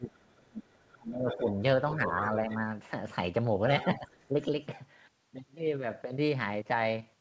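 Speech suppressed in double talk runs from the start to 1.53 s. The talker's level sinks hard, roughly 30 dB at its deepest, for about a second and a half while the far end is also speaking. The likely cause is an echo canceller that could not tell the near voice from loudspeaker echo and clamped down on both. Shallower dips recur at 2.07 to 2.5 s and 3.98 to 4.34 s, briefer and only around 5 to 10 dB deep.

The other side's voice leaking through appears at 1.29 to 1.52 s, 1.91 to 2.57 s and 3.8 to 4.44 s. A second voice sits roughly 10 to 15 dB under the talker, and the last stretch is the faintest. It is likely residual loudspeaker echo that the canceller failed to remove from the microphone signal. Across the band, nothing reaches above 8 kHz, consistent with a G.722 call path at 64 kbps.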